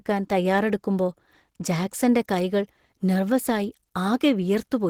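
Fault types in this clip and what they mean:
Opus compression: The speech was likely passed through an Opus encoder starved of bits, which fits a rate of 16 kbps, with the encoder splitting the signal between its speech coder for the lower band and its transform coder above it. Throughout the clip the damage is plainly audible. The voice sounds hoarse and somewhat muffled, and the upper range, though still fullband, is grainy and noisy where clean detail should be.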